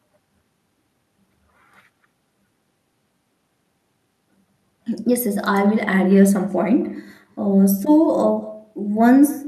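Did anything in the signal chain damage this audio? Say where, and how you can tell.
Yes. Throughout the clip there is echo with no canceller, a call-processing fault. Every syllable is followed about a fifth of a second later by a thinner copy roughly 22 dB down. On a spectrogram, each harmonic stack has a faint, delayed ghost trailing it.

At the network and jitter buffer stage, there is jitter buffer speed-up from 4.73 to 6.96 s (108% speed) and from 7.36 to 8.27 s (105%). The buffer trimmed pitch-period slices, roughly 200 ms and 50 ms in total, so speech hurries at unchanged pitch. On a spectrogram, syllables shorten while harmonic spacing stays put.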